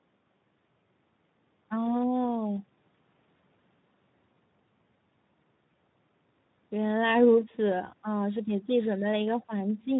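From start to finish the speech carries plainly audible Speex codec damage. Speex, a CELP codec, rebuilds speech from a predictive filter driven by a coded excitation. Here too few bits go to that excitation, which fits a bitrate around 11 kbps, so the speech sounds noisy and hoarse.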